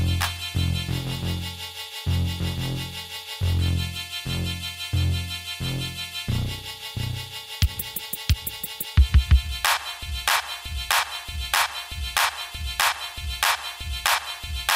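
From 10.03 s to the end, the audio falls into a broken-record loop: a 0.63 s fragment repeats exactly, back to back, about eight times, and the material that should follow is lost. The likely cause is a stalled player, encoder or stream resending its last buffered fragment.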